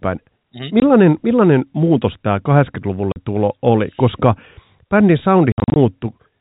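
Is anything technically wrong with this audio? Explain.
Yes. There is packet loss filled with silence. Audio packets were lost, and the receiver played silence in their place. This happens at 0.80 s (20 ms), 3.12 s (40 ms), and in scattered gaps from 5.52 to 5.76 s (160 ms in all, longest 60 ms). The gap lengths fit 20 ms packets, and each hard-edged hole chops the speech.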